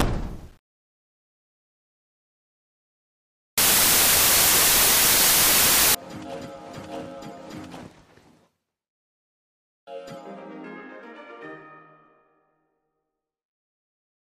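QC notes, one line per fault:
0.0–5.95 s, samples built from the wrong bytes: the bytes of each sample are joined in the wrong order or at the wrong offset, so the noisy low bits become the large part of each value and the sound turns into loud, harsh broadband noise. Unlike added background hiss, the noise replaces the sound entirely.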